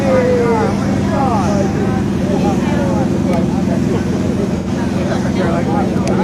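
A short stretch of audio with AAC frame loss and concealment at 1.16 s and 4.57 s. Each gap, about 43 ms then 85 ms, fits one and two lost frames, patched from earlier spectrum.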